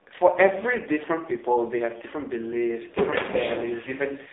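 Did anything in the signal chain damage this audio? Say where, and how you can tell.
Yes. The damage is at the codec stage, from an AMR narrowband mobile codec, across the whole clip. Nothing passes above 3.8 kHz, and the band sits near 250 Hz to 3.7 kHz. The speech is heavily buzzy and synthetic, which fits a very low mode near 5 kbps.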